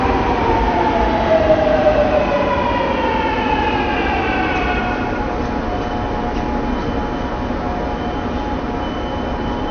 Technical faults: MP3 compression

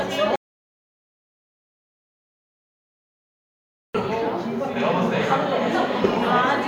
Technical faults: audio dropout to silence

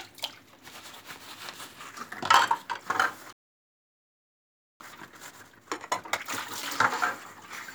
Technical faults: playback stall; time-compressed catch-up

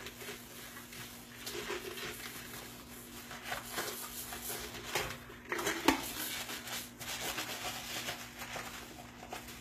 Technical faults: HE-AAC compression

